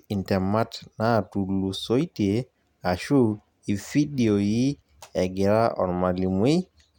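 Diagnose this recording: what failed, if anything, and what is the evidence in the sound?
Nothing failed: the sound gives no evidence of a fault at any stage of this speech recording.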